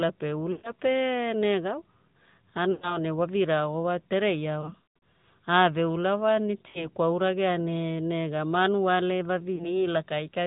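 Throughout, the speech sounds muffled, plainly buzzy and synthetic, with nothing above 4 kHz. This is the AMR narrowband mobile codec, whose coarse vocal-tract model points to a rate near 10 kbps.

At 0.52, 2.72, 4.62, 6.68 and 9.56 s the speech briefly smears, warbles and fades. These are lost AMR speech frames: the decoder repeats its last good settings at falling gain. The gaps fall just before "pe negawa", before "ne wa", and between "ula wa" and "kwauragea ne nega manuale". The 4.62 s event is scattered over 0.4 s.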